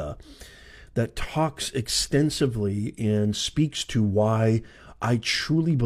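No technical faults are audible.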